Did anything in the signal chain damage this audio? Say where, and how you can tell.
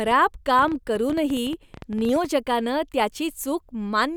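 Yes. A train of clicks runs from 0.08 to 2.26 s: around thirty same-shaped pulses at about 11 per second, unevenly spaced, peaking roughly 5 dB above the speech and persisting through pauses. This is likely interference reaching the analogue wiring. Unlike clipping crackle, the clicks ignore signal level.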